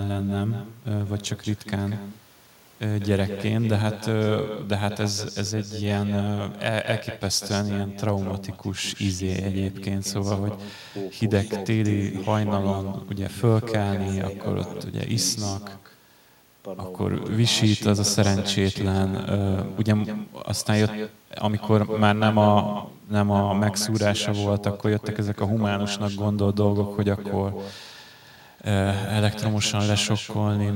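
From start to finish, echo with no canceller. Each phrase returns about a fifth of a second later, about 11 dB quieter and thin.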